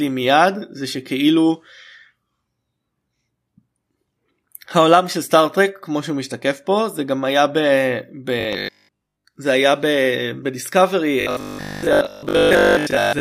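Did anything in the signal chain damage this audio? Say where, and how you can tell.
Yes: robotic sound from repeated short buffers, 8.41–9.25 s and 11.21 s onward. The 50 Hz buzz fits 20 ms blocks, likely replayed at the buffer stage over most real audio.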